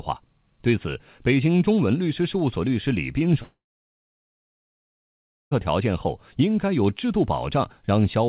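Speech, band-limited to 4 kHz as through a narrowband call codec, has a likely long network dropout from 3.42 to 5.53 s: a brief fading buzz or hiss, then near-silence, showing as a blank gap on the spectrogram and a flat waveform.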